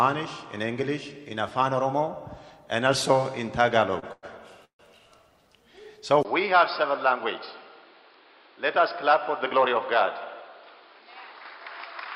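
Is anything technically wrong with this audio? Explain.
Yes, there are three kinds of fault.

At 3.99 to 4.04 s there is a short stall from a late packet. The last sound is held for about 30 ms while the jitter buffer waits, then carries on with nothing lost. Unlike the freezes that follow, it stays a brief smear and never falls silent.

At 4.12 to 4.25 s and 4.65 to 4.81 s there are call audio freezes, likely from packets held up in transit. The receiver extends the last sound as a fading buzz, for 103 ms and then 145 ms, ending in silence (about 30 ms, then 100 ms). These are longer than the stall and decay into a gap, yet nothing is skipped.

From 6.23 s to the end, the input is switched to a poorer device, likely a different microphone or a headset call profile. A 20 ms silence marks the switch. After it, nothing remains above 5.2 kHz, the sound is a few decibels quieter, and a new background noise sits well below it. 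Unlike a filter or a level change alone, the tone, level and noise all change at the same moment and stay changed.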